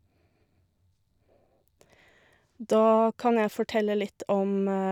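No technical faults are audible anywhere in the speech.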